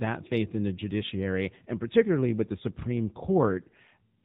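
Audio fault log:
Throughout: AMR narrowband mobile codec. The speech is buzzy and synthetic, capped at 4 kHz, which fits AMR-NB at 7.4 kbps squeezing the voice into a few pulses per frame.
4.18 to 4.24 s: AMR comfort noise. For 60 ms at the very end, the real background gives way to smooth, steady hiss, as the phone stopped sending speech frames and synthesised filler noise.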